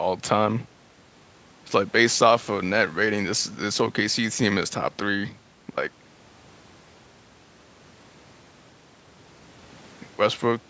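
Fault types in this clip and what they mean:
No faults heard; the speech carries the normal signature of call microphone processing, with nothing above 8 kHz and the lowest bass trimmed.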